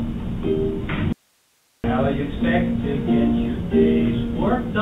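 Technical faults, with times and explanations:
1.13–1.84 s, audio dropout to a faint residue: the signal was likely lost upstream while the path after the break stayed live, so the sound cuts out abruptly for 0.71 s. Only hiss remains, roughly 40 dB down, before it snaps back.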